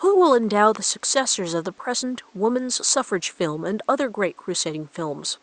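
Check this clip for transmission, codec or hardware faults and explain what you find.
The speech comes through intact, with nothing wrong anywhere along its path, and the only other sound is the room's own background noise sitting about 37 dB below the speech.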